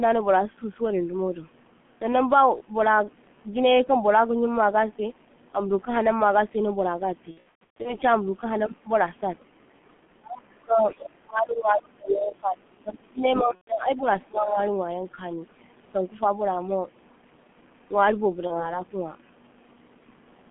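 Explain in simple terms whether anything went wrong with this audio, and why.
The whole recording passed through the G.723.1 codec, an early internet-phone codec that squeezes speech very hard. Only the band from about 150 Hz to 3.4 kHz survives, so the sound is muffled. The codec also processes speech in 30 ms chunks and adapts slowly, which makes the voice hoarse and smears the consonants together. In this clip the damage is heavy and lasts from start to finish.

There are three spots of VoIP packet loss concealed by the speech codec. From 7.31 to 7.97 s, about 390 ms of audio went missing in pieces spread over roughly half a second, and the longest single gap was 120 ms. Another 120 ms dropped out at 13.55 to 13.72 s, and a short 30 ms gap falls at 18.47 to 18.78 s. Each time, the decoder guessed the missing sound by stretching what came just before. That produces a buzzy or noisy stretch that fades out, and the voice stays weak for a moment afterwards.

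The voice also sinks or nearly vanishes at three points: 10.12 to 10.84 s, 11.24 to 14.06 s, and 14.27 to 14.58 s. The first dip is the deepest, close to silence. The later ones are milder, and the last one is only partial. The likely cause is speech suppressed in double talk. Both people were talking at once, and the echo canceller, unable to tell the talker apart from the loudspeaker echo, turned everything down.

For a brief moment at 13.34 to 13.44 s, a second, quieter voice comes through underneath the main one. This is most likely the other side's voice leaking through. The talker's loudspeaker was playing the far end, the microphone picked it up, and the echo canceller did not fully remove it. The leak lasts only about a tenth of a second and sits well below the main voice. It lands inside the long suppressed stretch, just before the second packet loss.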